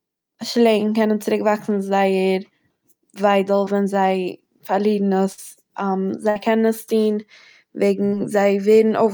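The clip is speech with four packet-loss dropouts. At 3.65 to 3.68 s there is short concealed packet loss: about 20 ms of audio failed to reach the decoder in time, and the receiver bridged the hole by extending the preceding sound before blending back into the real signal. This is heard as a brief smear or wobble. The other three events are each a burst of packet loss, with about 60 ms missing. They occur at 5.32 to 5.39 s, just after "זיי פארלירן"; at 6.30 to 6.37 s, just before "קענען עס טוהן"; and at 8.06 to 8.14 s. In each, the decoder continued the last sound for roughly 50 to 65 ms while fading it, producing a held buzz or decaying hiss. Playback then resumes further on, so the audio in between is lost.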